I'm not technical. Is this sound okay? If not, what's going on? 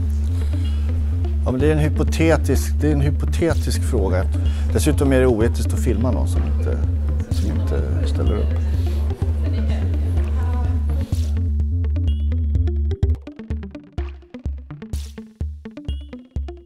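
Yes, this one sounds fine, with nothing going wrong anywhere that you'd need to worry about.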